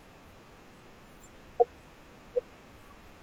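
At 1.56 to 1.60 s, compressed frames are skipped and the speech jumps ahead by about half a second. At 3.05 to 3.10 s, a second skip loses about a fifth of a second. Both jumps are whole multiples of a 42.7 ms codec frame. On a spectrogram, the harmonic traces break and restart mid-pattern. In the waveform, the envelope changes shape abruptly.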